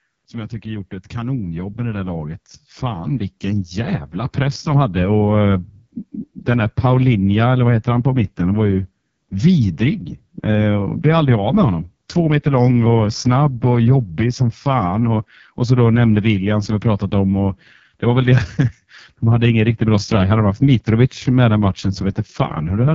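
Throughout the clip the speech carries the AMR wideband (HD Voice) codec at heavy damage. The rough, raspy texture points to its lowest mode, around 6.6 kbit/s, where the coarse vocal-tract model starves detail, and nothing is present above 7.5 kHz.

From 0.05 s to 4.97 s an automatic gain rising fault lifts the level by about 13 dB. The control judged the input too quiet and ramped its gain slowly, so speech and background swell together before settling just ahead of "och eh".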